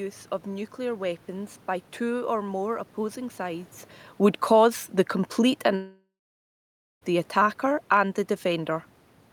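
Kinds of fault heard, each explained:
Automatic gain falling: Right after "sides would cause the", from about 5.41 s to 8.78 s, the gain control eases the level down by about 4 dB, so speech and background sink together. The waveform envelope tapers gradually, and the spectrogram dims evenly across all frequencies.
Long network dropout: From 5.75 s to 7.03 s the sound breaks off, likely because audio stopped arriving, and about 1.26 s is lost. A fading buzz continues the last sound, then about 0.93 s of near-silence follows. The spectrogram shows smeared, fading bands, then an empty gap.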